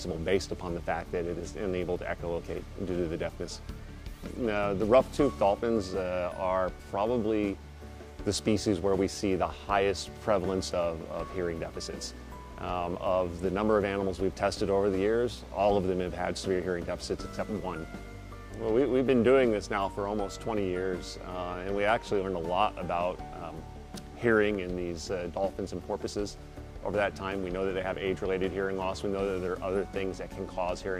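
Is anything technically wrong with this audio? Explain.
No, nothing technically wrong turns up anywhere in this audio.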